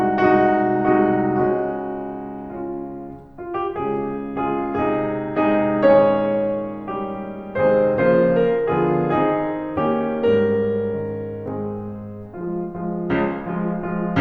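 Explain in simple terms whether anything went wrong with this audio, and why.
Nothing went wrong with this music recording, as no technical fault can be heard anywhere in it.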